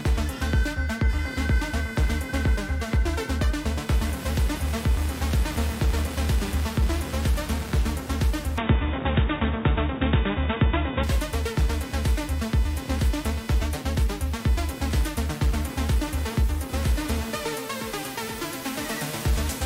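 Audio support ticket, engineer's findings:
Computer activity noise throughout: buzzing pulse train near 500 Hz, roughly 20 dB below the signal, tracking machine load rather than the audio. Probable component: shared ground between audio interface and computer; processor, graphics or mouse current swings modulating it.

Input switched to a poorer device, 8.58 to 11.03 s: abrupt dulling, band cut off at 3.8 kHz, new noise floor around 35 dB under the signal, level unchanged, no gap at either switch. Likely cause: system input reassigned to a narrower-band microphone or headset call profile, then restored.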